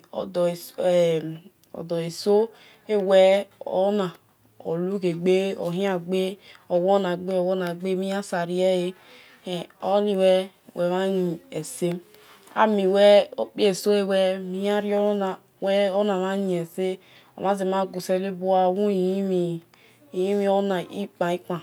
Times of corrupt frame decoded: none

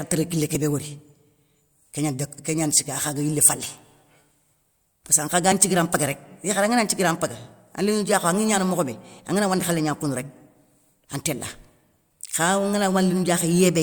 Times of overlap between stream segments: 3.53

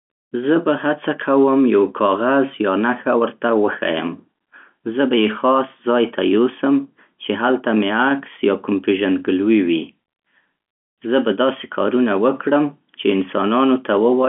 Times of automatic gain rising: none

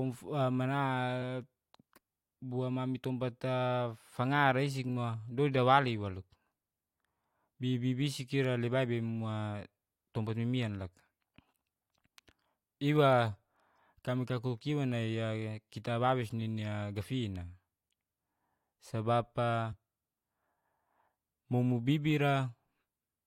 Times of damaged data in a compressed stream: 19.72-19.74

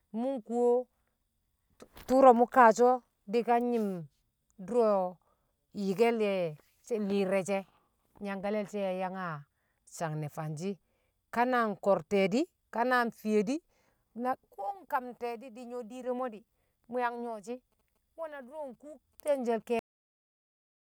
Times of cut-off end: 19.79-20.95

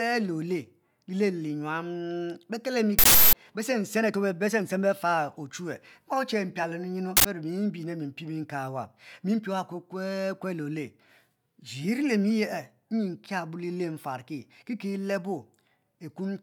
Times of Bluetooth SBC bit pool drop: none

